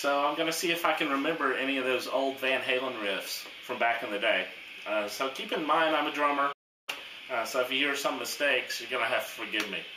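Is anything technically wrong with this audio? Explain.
Yes. At 6.52 s the sound cuts to silence for 0.35 s, then resumes at 6.89 s. This is a playback stall, likely the player running short of data or having its thread blocked.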